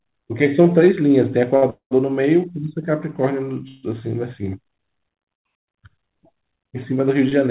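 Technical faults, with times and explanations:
1.56 to 1.64 s, short stall from a late packet: the sound is held about 59 ms too long with a faint buzz or dip, then carries on from the same point. A packet was late, the jitter buffer ran empty, and the receiver stretched the last sound until it arrived, so nothing is lost.
1.70 to 1.93 s, call audio freeze: a 0.21 s gap opens. The last sound continues as a fading buzz or hiss, drops into about 110 ms of silence, then resumes where it stopped. Packets were likely held up in transit and drained the jitter buffer. Nothing is missing, and everything after simply runs later.
3.68 to 3.85 s, call audio freeze: a 0.15 s hold in which the final sound is drawn out as a fading buzz or hiss without reaching silence, then picks up exactly where it left off. The receiver bridged the wait with the stretched sound, inserting delay rather than losing audio. 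The narrowband call path carries nothing above 4 kHz.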